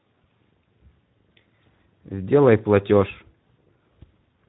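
From the start the speech carries Speex codec damage, plainly audible as a hoarse, noisy texture. The coarse excitation roughens harmonics, and the damage fits a bitrate near 11 kbps. On a spectrogram, harmonics look smeared and the region above 4 kHz, where present, appears as diffuse, shaped noise rather than structure.

At 3.52 s, VoIP packet loss concealed by the speech codec produces a brief stretched, fading sound. The decoder replays its last pitch and filter across a 20 ms gap, which fits one lost frame. In the waveform, a short repetitive, decaying stretch appears, then lingers weakened afterward.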